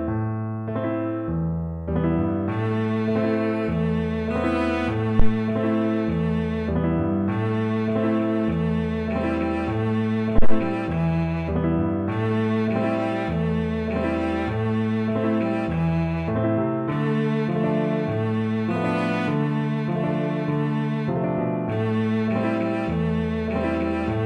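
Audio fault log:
5.20–5.34 s and 10.38–10.63 s, phantom power thump: switching a supply on or off on a live input pushes a voltage step through the coupling capacitors, giving deep thumps that decay within 33 ms and 55 ms.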